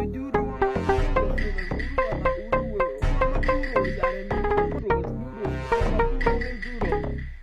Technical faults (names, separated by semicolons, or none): DECT cordless phone buzz; damaged data in a compressed stream